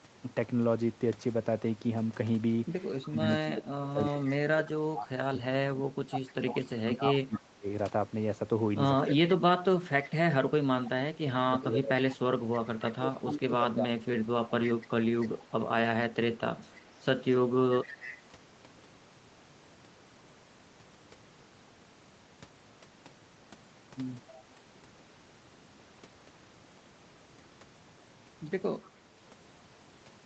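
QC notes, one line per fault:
3.10–14.11 s, speech suppressed in double talk: the voice repeatedly dips, at worst by roughly 25 dB, adding up to about seven seconds of lost level across the span. This is likely an echo canceller treating overlapping far-end talk as echo and attenuating both.
6.28–7.39 s, echo leak: a faint delayed copy of the voice, 289 ms behind and roughly 20 dB below the direct speech, is audible. A loudspeaker-side echo canceller likely failed to remove all of its microphone pickup, so the residue was sent back.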